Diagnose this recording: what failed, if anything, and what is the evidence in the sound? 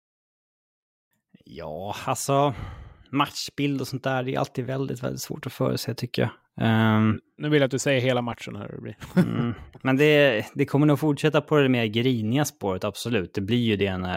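Nothing in the signal chain has failed: the speech comes through with continuous level and timing, and no stage shows a break, distortion or other disturbance.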